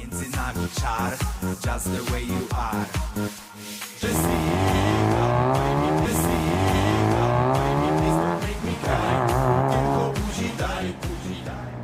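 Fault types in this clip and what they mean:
Stream segment repeated: the player queued the same two-second segment twice, so audio from 6.05 to 8.05 s plays again after a small blip.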